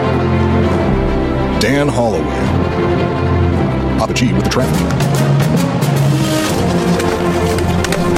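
At 2.43 s the pace jumps abruptly and stays fast to the end. This is a time-stretched section, sped up about 1.68 times with pitch unchanged. Short pieces were likely dropped to squeeze the audio, so it sounds rushed.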